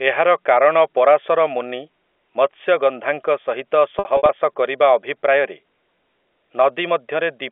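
A speech recording over a telephone-band G.711 line has brief buzzy, held stutters between 3.99 and 4.29 s, just before "କରିବା ଅଭିପ୍ରାୟରେ". This is packet loss with pitch repetition. About 150 ms went missing in scattered gaps over 300 ms, with the longest lasting 60 ms, which fits roughly five 30 ms packets. The receiver filled each gap by repeating the last pitch period.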